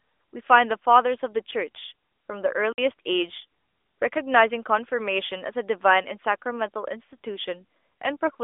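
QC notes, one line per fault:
2.73 to 2.78 s, block of digital silence: the speech drops to silence for about 55 ms and returns with no fade, leaving a short hole. This sounds like an output buffer that was not filled in time. A network dropout would usually be smoothed or filled with concealment noise, and a fade or gain dip would taper. This cut is hard on both sides, and the gap stays dead silent against the narrowband phone-line sound, which carries nothing above 3.7 kHz.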